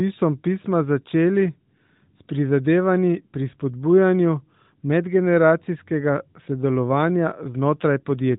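Nothing stood out on listening, and the speech carries only the band-limited, telephone-like character expected of the AMR narrowband mobile codec it passes through.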